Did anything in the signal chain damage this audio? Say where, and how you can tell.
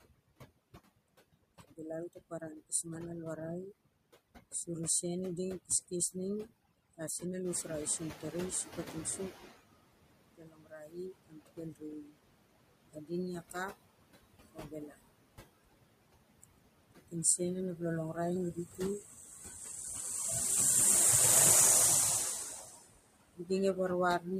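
Yes. Throughout, the background collapses to near silence dotted with twinkling specks. This is overdone noise removal in call processing: reduction set far too aggressively, switching off individual frequency bands near the noise estimate and taking quiet speech energy with them.

Noise suppressor artifacts run the whole clip. The residual noise ducks between phrases and swells under speech, with the steady noise cut by about 21 dB. The suppressor is gating each band frame by frame against its noise estimate, so the floor pumps with the speech.

Speech cut by the noise suppressor is audible at 0.05–0.78 s, 1.33–2.86 s (just before "ma na"), 3.86–5.03 s (before "i ding"), 5.63–7.23 s, 10.16–15.31 s, 16.12–19.61 s and 22.44–24.27 s. Soft consonants and endings sound swallowed, dropping by about 14 to 22 dB, worst across 10–15 s where roughly two seconds are affected. The suppressor misclassified low-level speech as noise.

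Noise suppressor catching up occurs from 7.45 to 9.55 s. When the room noise jumps by about 11 dB near 7.5 s, it first leaks through under-reduced, then sinks over about 2.1 s to roughly 16 dB of reduction. The noise estimate lagged the sudden rise before adapting.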